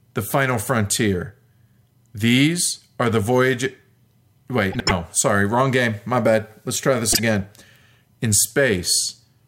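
At 4.72 to 4.91 s, the speech breaks into a brief garbled flutter. Frames are out of order here. Two neighbouring blocks, each about 72 ms, were decoded in swapped sequence. That fits runs of three 24 ms frames. The stretch plays its halves reversed. A shorter repeat comes at 7.12 to 7.19 s. There the swapped blocks are about 24 ms each, which points to single frames. No time is lost in either case.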